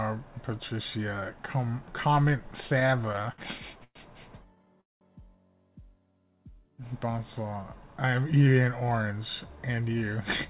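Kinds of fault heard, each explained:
Repeated stalls (stutter): the playback keeps running dry and the receiver stretches out the last sound to cover each wait. Between 2.8 and 3.97 s there are a dozen short hitches filling about 23 percent of that span. From 4.55 to 5.03 s five more cover half the span, the longest 200 ms and audibly fading. Nothing drops out. Unlike a smooth slow-down, the flow halts and restarts in jerks.
Jitter buffer slow-down: from 5.99 to 6.82 s the sound runs at 86 percent speed without any drop in pitch. That adds 122 ms as single pitch periods or bits of pauses are repeated to rebuild the playback reserve. Sounds come out drawn out rather than broken. That tells it apart from the stutter, where the audio stops and holds, and from tape-style slowing, which would lower the pitch.
Jitter buffer speed-up: in the final stretch, 9.67 to 10.48 s, surplus buffered audio is trimmed by cutting out short pitch-period pieces, about 70 ms in all. 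The sound runs at 108 percent speed at unchanged pitch and sounds hurried. It differs from the slow-down in direction. Unlike a dropout or packet loss, there are no gaps or clicks, because the removed pieces are stitched seamlessly at period boundaries.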